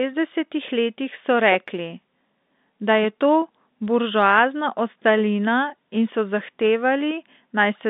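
No faults are audible anywhere in this speech clip.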